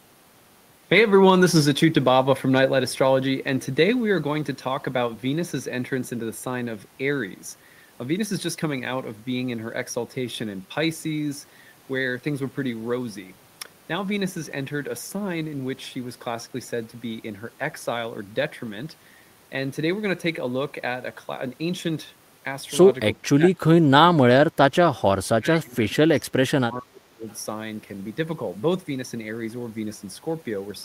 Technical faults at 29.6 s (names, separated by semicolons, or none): none